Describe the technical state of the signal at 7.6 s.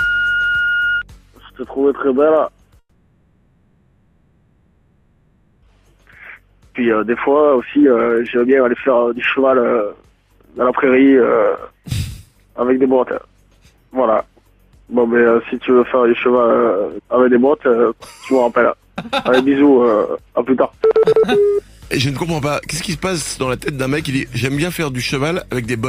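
At 7.6 s you're right in the middle of a jitter buffer speed-up that runs from about 5.77 s to 13.73 s. The receiver had built up more buffered audio than it wanted, so it kept snipping out short chunks a pitch period or so long to catch up. That pushes playback to about 115% speed while the pitch stays put, so the sound comes across noticeably hurried, and about a second and a half gets trimmed across the stretch.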